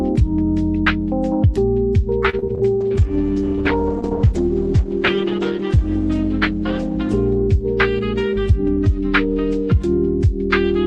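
Repeated packet loss (robotic sound) runs from 2.29 to 2.61 s. Packets kept going missing, and each hole was bridged by stretching the previous sound, with the longest gap 38 ms. About a third of that stretch is patched-in audio, so it turns choppy.

A call bitrate drop sets in at 2.82 s and lasts until 10.38 s. The encoder was forced onto far fewer bits, and the sound fits a fall from 64 to 12 kbps. The audio becomes coarse, watery and dulled at the top end, and it sits at its lowest quality for about 2.8 s.

A jitter buffer speed-up occurs from 8.33 to 8.89 s. Excess buffered audio was trimmed by cutting out tiny pitch-period slices, a few tens of milliseconds in all. The sound plays about 5% fast at unchanged pitch and feels slightly hurried.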